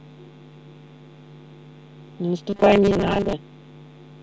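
Between 2.50 and 3.33 s, audio likely arrived too seldom, so a 5 ms buffer repeated over most of that stretch, producing robotic sound from repeated short buffers: a rigid 200 Hz metallic buzz.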